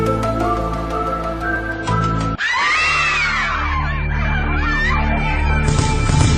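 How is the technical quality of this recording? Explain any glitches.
The recording has one fault: a quality drop that runs from 1.73 s to the end.

Adaptive stream at a lower bitrate, from 1.73 s onward. When the connection slowed, the player switched to a lower-bitrate version of the stream. The change is sudden and leaves no gap. From that point codec artefacts increase and nothing remains above 9.7 kHz, which fits a step down from about 96 kbit/s AAC to about 24 kbit/s AAC.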